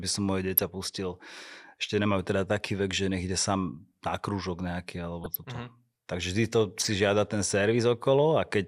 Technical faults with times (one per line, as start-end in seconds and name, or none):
0.48-0.65 DAB burbling
5.24-5.44 DAB burbling
6.80-6.92 DAB burbling